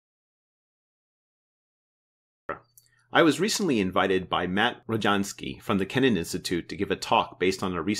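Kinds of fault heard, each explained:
Audio dropout to silence: input likely lost while recording continued, leaving silence with no room tone until sound cuts in mid-flow at 2.49 s.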